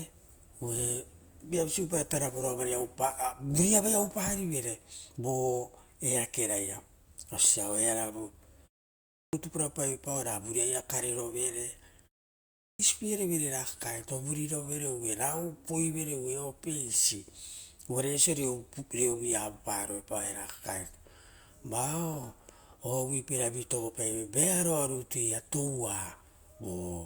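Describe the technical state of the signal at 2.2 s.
At 2.2 s the adaptive stream is still at its low-bitrate start, from 0 to 4.0 s, with thin, artefact-laden treble fitting about 24 kbit/s Opus, then a sudden gapless step up, unlike a stall.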